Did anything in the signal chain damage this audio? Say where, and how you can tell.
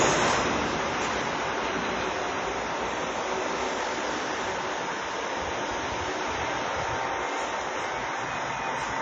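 Yes, at the codec stage, and it's there for the whole clip. Everything has a ringing, washy smear around it, with a hiss that swells and fades along with the sound, and nothing comes through above 8.5 kHz. That's likely WMA compression, an early WMA 1 style encoder at a low rate, which fits something around 32 kbps. Its long transform blocks spread quantisation noise over tens of milliseconds, and the bit budget zeroes the weaker high content.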